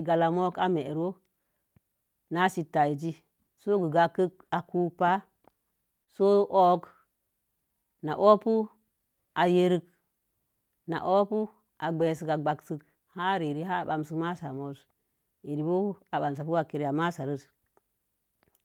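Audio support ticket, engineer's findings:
Short concealed packet loss at 6.03–6.09 s: about 40 ms smeared and extended by receiver concealment; spectrogram shows repeated harmonics fading into blur, no hard gap in the waveform.

Lost packet rebuilt from error correction at 11.99–12.01 s (20 ms) and 14.53–14.59 s (40 ms, fits two frames): decoder played low-bitrate FEC copies; rougher, noisier patches, grainier texture on the spectrogram.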